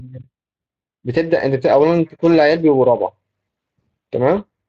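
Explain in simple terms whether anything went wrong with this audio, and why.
Something did go wrong, and it lasts from the first moment of the speech to the last. The audio has passed through the Speex codec, an older speech compressor from internet calling and game chat. Speex rebuilds the voice from a simple model of the throat plus a coded buzz or hiss that drives it. Too little detail goes into that driving signal, so the speech comes out noticeably rough, hoarse and grainy instead of clean.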